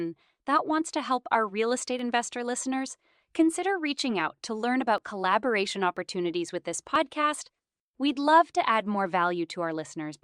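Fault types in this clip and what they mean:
Overlap between stream segments: overlapping timestamps on the 1 s segments make the player trim milliseconds of real speech, so the speech skips briefly at the segment joins near 2, 4, 5, 6 and 7 s.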